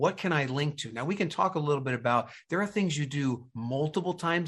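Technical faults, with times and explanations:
No technical faults can be heard in this speech recording. Nothing in the audio calls for a time or an explanation.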